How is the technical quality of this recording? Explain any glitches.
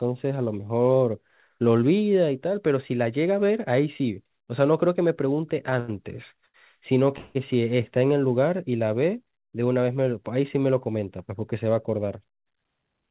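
The recording has a run of timing glitches in the middle and a hurried stretch near the end, heard through a telephone-band codec path. The sound has nothing above 4 kHz and the grainy character of G.711 A-law coding, which fits a 64 kbps call stream.

Short stalls from a late packet occur at 5.70 to 5.74 s, 5.80 to 5.90 s and 6.46 to 6.56 s. Each time a packet missed its playout slot, the jitter buffer emptied, and the receiver kept repeating the last sound until the packet arrived. The holds last about 15, 84 and 80 ms. The speech then resumes exactly where it paused, so nothing is lost. What you hear is a syllable briefly smeared or buzzing. These stalls are distinct from a freeze because they are brief, with no fading tail.

A call audio freeze runs from 7.18 to 7.37 s. The likely cause is packets held up in transit long enough to drain the buffer. For about 170 ms the receiver extends the last sound as a decaying buzz before the delayed audio plays on from the same point, adding a gap without dropping any speech. 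It never falls fully silent. The freeze is set apart from the earlier stalls by its length and the audible fade of the concealment.

A jitter buffer speed-up follows from 12.31 to 12.90 s. The buffer had built up more delay than it aims for. To catch up, the receiver trimmed out small pitch-period-sized pieces, roughly 70 ms in total. Speech in this stretch plays about 10 percent fast but keeps its pitch, so it sounds rushed rather than chipmunk-like. Unlike the stalls, this fault shortens the timeline instead of stretching it.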